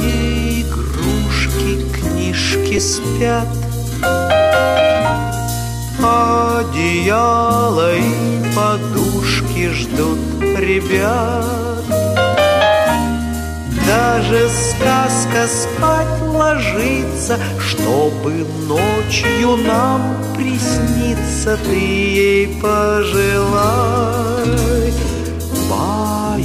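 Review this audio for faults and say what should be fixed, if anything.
At 2.77 s a lost LE Audio frame leaves a 7.5 ms hole, which the LC3 decoder fills by reusing the previous spectrum with random signs. The result is a brief noisy smear rather than the hard click or silence of a plain dropout. A stronger Bluetooth link with less interference and room for retransmission would prevent it.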